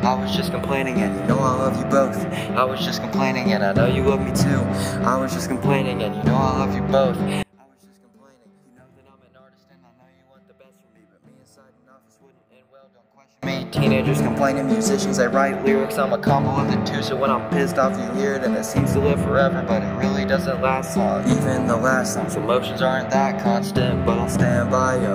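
The audio drops by about 33 dB from 7.43 to 13.43 s, almost vanishing, background included, then returns. The likely cause is one channel inverted: with one stereo side's polarity flipped, the shared content cancels in the mono sum, leaving only the small mismatch between channels.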